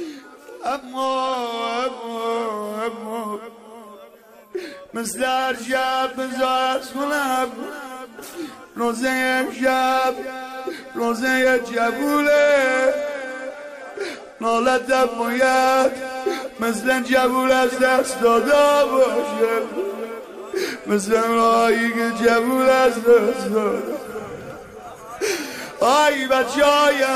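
From 1.05 to 2.88 s, and again from 12.37 to 16.24 s, the sound turns dull and grainy. This is a Bluetooth SBC bit pool drop. The link got congested, so the sending device cut the bits per frame to keep audio flowing. The quality points to a fall from a bit pool of about 31 to 15, near 105 kbps. The top sub-bands lose their bits and the treble fades. The remaining bands are coarsely quantised, adding gritty noise. Each time, clarity returns once the rate recovers.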